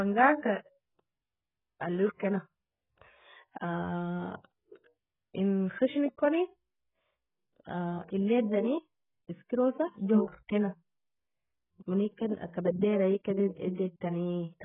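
Speech, heavily coded for its whole length by what is likely AAC compression at a very low bitrate, consistent with about 8 kbps AAC-LC: nothing survives above about 3.8 kHz, so the speech sounds dull and smeared, with warbling, fizzy sibilants.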